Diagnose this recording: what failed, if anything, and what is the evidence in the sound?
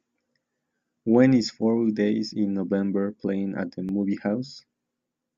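A repeated buffer at 3.89 s points to the driver or buffer stage: new audio arrived late, so one 10 ms block played twice, with no audio lost. It is heard as a brief click or buzz. The waveform shows the same short segment twice with a hard seam, and the spectrogram shows a thin vertical line.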